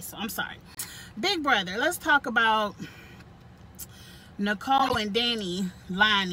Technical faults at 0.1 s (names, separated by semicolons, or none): none